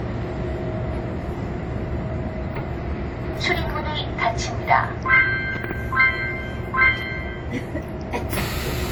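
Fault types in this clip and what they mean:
Transcoding between lossy codecs: two codecs' artefacts are heard stacked, likely WMA at 48 kbit/s then Opus at 32 kbit/s. Nothing sounds above 20.2 kHz.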